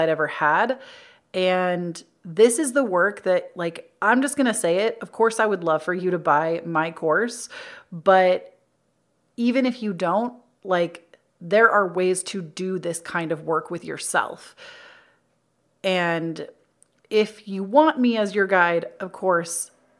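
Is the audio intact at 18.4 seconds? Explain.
Yes, the audio at 18.4 seconds is intact, with no audible fault at that moment.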